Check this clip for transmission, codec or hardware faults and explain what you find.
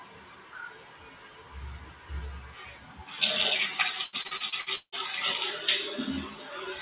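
Four kinds of fault are audible in these everyday sounds. The band stops at 4 kHz, which fits a G.711 mu-law call path running at 64 kbps.

A stuck bit runs through the whole clip. Added distortion rides on everything, and the quiet moments fill with a hiss-like noise instead of falling silent. The likely cause is one data bit held at a fixed value, so roughly half the samples are pushed off by that bit's weight. Because the errors follow the waveform, the result is distortion tied to the sound, not the plain hiss of a noisy channel.

A noise suppressor applied to music or sounds is also active throughout. Level swings of around 15 dB make steady parts and tails pump and thin out while sharp onsets pass almost untouched. A speech-tuned suppressor treats sustained energy and ambience as noise. A fader or gain change would move attacks and tails together, but this follows the character of the sound.

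Sound cut by the noise suppressor shows up in four stretches: 0.00 to 1.55 s (deepest drop about 9 dB), 1.78 to 2.10 s (about 9 dB), 2.40 to 3.04 s (about 8 dB) and 6.35 to 6.64 s (about 6 dB). In each, held or decaying material sinks and its decay is clipped early, while abrupt transients stay put. Unlike a dropout, the sound never disappears completely.

Repeated packet loss (robotic sound) fills 4.04 to 4.95 s with seven holes, the longest 170 ms. About half of that span is filled by extending the previous sound. Each gap is patched by repeating the last audio, and the next loss arrives soon after, so the passage turns choppy with pieces missing. Its stuttering, repeated texture sets it apart from the smooth level dips of the suppressor.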